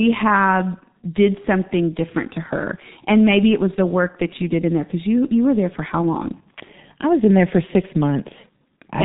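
From start to end the speech carries heavy G.723.1 codec damage. Nothing reaches above 3.8 kHz, so the voice sounds muffled and hoarse and consonants smear together, which fits a low-rate stream of about 6.3 kbit/s coding in 30 ms frames with a slowly updated voice model. On a spectrogram the energy stops at a flat ceiling near 3.8 kHz, and the harmonics look coarse and blocky from frame to frame.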